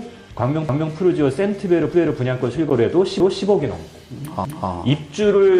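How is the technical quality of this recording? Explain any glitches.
The recording has two kinds of glitch: three repeated passages and one brief dropout.

Overlapping chunks occur at 0.69 to 0.94 s, 3.20 to 3.45 s and 4.45 to 4.70 s. The audio was handled in blocks of 1.0 s, and at these joins each new block began 250 ms before the previous one had finished. That quarter-second of sound therefore plays twice. Each repeat is heard as a distinct stutter, as if the audio briefly jumped back and replayed itself before carrying on.

A gap between stream segments occurs at 2.70 s. The timestamps of two consecutive segments did not quite meet, leaving a hole that the player filled with silence, adding about 11 ms of time. The result is a short, hard-edged dropout, a sudden tick of nothing cutting into the sound. None of the audio itself is lost. The sound is only pushed back slightly.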